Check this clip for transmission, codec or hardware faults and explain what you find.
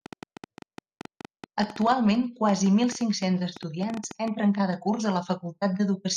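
One hardware-type fault is present. From 0.06 to 4.29 s, ending just before "entren cada curs a", irregular ticking pops sit over the speech, about forty at roughly 8.3 per second and peaking about 5 dB above it. This train of clicks likely comes from interference or a faulty connection or power supply.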